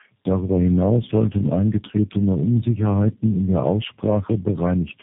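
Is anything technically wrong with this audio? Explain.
Yes. Tandem speech coding runs through the whole clip. The speech was decoded and re-encoded by several speech codecs in turn, each working on the last one's damage. It sounds rough, muffled and warbly, with nothing above 3.7 kHz, which fits about four narrowband codecs in a row.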